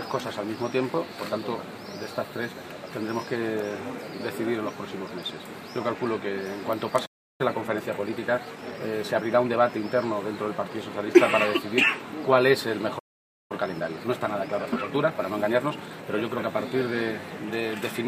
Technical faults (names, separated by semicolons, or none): playback stall; time-compressed catch-up